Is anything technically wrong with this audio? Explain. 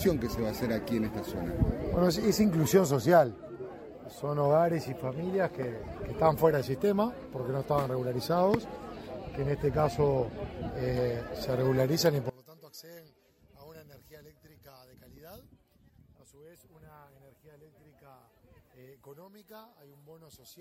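Yes. From about 12.3 s right through to the end at 20.6 s, the sound suddenly collapses by about 26 dB and turns faint, with the solid centre gone. That's likely one channel inverted: one side of the stereo pair has had its polarity flipped, so when the two are summed to mono, everything they share cancels out. What's left is just the small difference between the channels.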